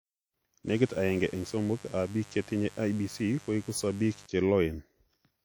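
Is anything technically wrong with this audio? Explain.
Yes, there are two faults.

WMA compression runs through the whole speech clip, and its damage is plainly audible. The likely cause is a simple WMA 1 encoder at a low bitrate, around 48 kbps. Its long transform blocks smear quantisation noise over tens of milliseconds and drop weak spectral lines, so the speech rings and washes, with hiss that breathes along with it.

Mains buzz runs from 0.68 to 4.26 s at about 25 dB below the speech. Switching spikes, twice per 50 Hz cycle, leaked into the signal path and brought harmonics of 50 Hz up into the kilohertz range. The result is a steady buzz underneath the speech.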